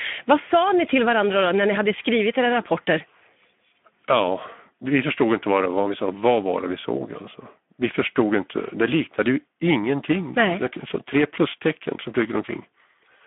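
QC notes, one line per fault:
throughout: Speex codec. The speech has the noisy, hoarse grain of a CELP coder that is short of bits for its excitation. Voiced sounds lose their clean periodicity and take on a buzzy, slightly synthetic texture. The damage is plainly audible and points to a low setting of around 11 kbps. The line is also band-limited to roughly 200 Hz to 3.5 kHz, so the lows are thin and there is no top-octave content at all.
9.95–13.27 s: periodic clock jitter, starting just after "liknade ju" and running to the end. A periodic disturbance of around 1 kHz is modulating the converter clock, which puts sidebands above and below every component of the speech at that spacing. The upper partials carry the strongest sidebands, so the sound gains a rough, metallic edge. That edge follows the signal and disappears in the pauses.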